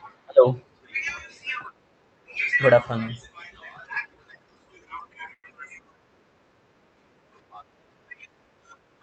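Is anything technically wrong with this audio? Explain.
Yes. Between 5.33 and 5.46 s there is a call audio freeze: packets were likely held up in transit and the jitter buffer ran dry. The receiver stretched the last sound into a fading buzz or hiss for about 0.1 s, with roughly 60 ms of silence, then resumed where it stopped. The speech is delayed by about 0.1 s but nothing is lost. The call codec's cut-off near 8 kHz is also audible as a ceiling on the high end.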